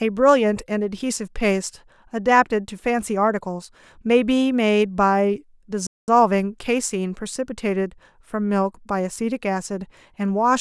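At 5.87 s the speech cuts to silence for about 210 ms, then picks up at 6.08 s: a playback stall, likely the player running dry.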